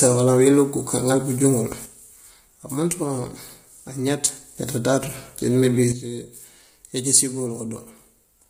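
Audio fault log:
Throughout: low-delay AAC compression. The speech sounds rough and grainy, with a noisy haze filling the gaps between pitch harmonics and a thin, somewhat synthetic top band. Nothing is present above about 15.6 kHz. The likely cause is AAC-ELD, the low-delay codec used for video calls, at heavy compression that fits a low bitrate around 24 kbps. Its short frames can't separate closely spaced harmonics, so the coder smears noise between them and substitutes an approximated upper band.
1.86–4.57 s and 5.92 s to the end: sudden gain jump. The level drops abruptly with no fade, about 6 dB in the first stretch and about 9 dB in the second, and returns to full level between 4.57 and 5.92 s. The speech and the background noise fall and rise together, which points away from a change at the source. The likely cause is a digital gain setting applied instantly between one sample and the next instead of being ramped.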